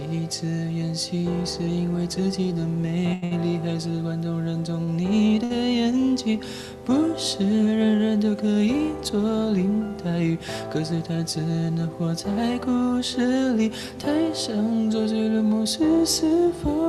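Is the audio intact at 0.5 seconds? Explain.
Yes, the audio is intact at 0.5 s, with no dropout, click, distortion or other fault at that moment.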